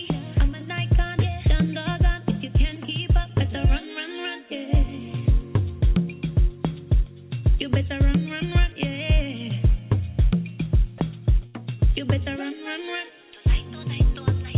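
At 11.46 s a burst of packet loss begins and lasts until about 11.56 s. Rather than cutting to silence, the receiver stretches the last sound it received across the gap for about 78 ms, fading it out, so the gap becomes a short held buzz or hiss that dies away. The audio then resumes with about 80 ms skipped. That decaying fill, rather than abrupt silence or a click, sets it apart from a plain dropout.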